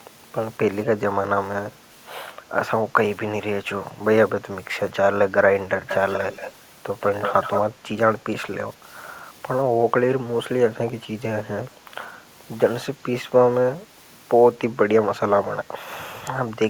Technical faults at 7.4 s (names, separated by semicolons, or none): echo leak